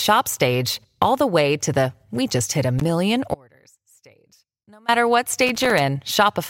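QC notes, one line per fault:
2.79–2.90 s and 5.47–5.81 s: loose connector crackle. Two irregular bursts of scratchy crackle, about 0.11 s and then 0.34 s long, where a worn or dirty contact is making and breaking as it shifts, chopping the speech and popping on any DC across the line. Unlike clicks from digital errors, the texture is ragged and uneven.
3.34–4.88 s: audio dropout to a faint residue. The speech cuts out abruptly for about 1.54 s and returns just as suddenly mid-flow. The gap holds only a faint leak of the sound, roughly 30 dB below its normal level. The likely cause is a break in the signal feed while everything downstream stayed live, so a trace still gets through. The hard edges and the residue set it apart from a natural pause or a fade, and it lacks the crackle of the contact fault.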